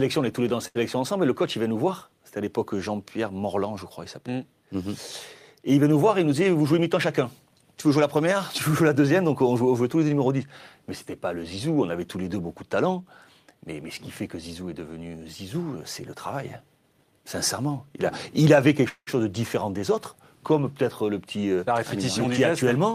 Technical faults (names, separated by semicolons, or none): short stall from a late packet; jitter buffer speed-up; call audio freeze